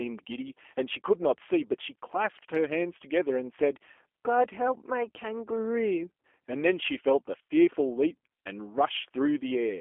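A speech clip carrying G.729 codec damage from start to finish. The sound is narrowed to a telephone band of roughly 300 Hz to 3.4 kHz. It has a plainly rough, synthetic edge, which fits an 8 kbit/s G.729A link rebuilding the voice from a vocal tract model and a few pulses per frame.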